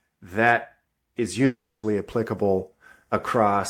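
From 1.45 to 1.85 s, likely a long network dropout: 0.38 s lost, a decaying buzz, then 0.28 s of near-empty waveform and blank spectrogram.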